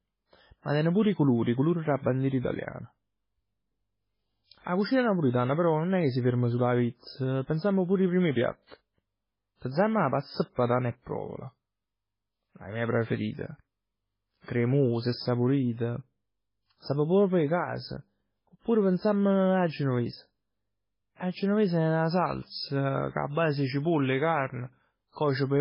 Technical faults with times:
0.00-25.60 MP3 compression

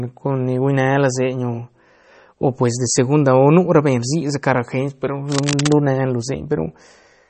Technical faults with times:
0.00-7.30 MP3 compression
5.32-5.76 cable scratch noise

